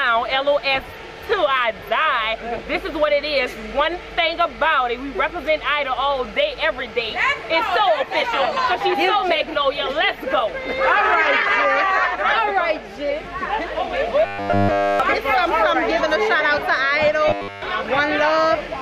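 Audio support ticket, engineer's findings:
Likely input starvation: short buffer, about 10 ms, replayed in place of missing audio. Robotic sound from repeated short buffers, 14.26–15.00 s and 17.28–17.62 s. Fixed 100 Hz metallic buzz follows the original only roughly.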